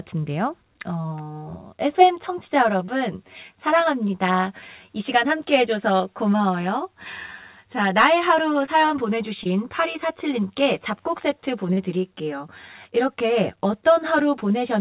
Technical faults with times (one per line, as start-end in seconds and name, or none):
0.91-14.81 channel delay (comb filtering)
1.02-1.06 short concealed packet loss
2.86-2.90 short concealed packet loss
5.98-6.02 short concealed packet loss
8.66-8.69 short concealed packet loss
9.43-9.47 short concealed packet loss
11.73-11.79 short concealed packet loss